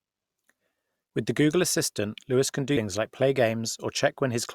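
At 2.73 to 2.77 s, just before "like play", the speech is hit by damaged data in a compressed stream. A short run of bytes in the encoded file was lost or overwritten, so the decoder misreads the frames there, loses its place in the stream and has to hunt for the next valid frame header before playback recovers. For about 40 ms the sound gives way to a brief glitch.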